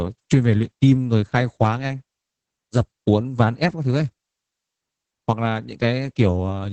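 From start to finish the speech carries Opus voice compression damage, and it is heavy. The band stops at about 8 kHz, which removes the sibilant air. The linear-prediction coder is starved of bits, so it quantises the excitation coarsely and leaves the voice hoarse, slightly buzzy and faintly robotic. The degree of damage points to a bitrate near 10 kbps in the SILK speech mode.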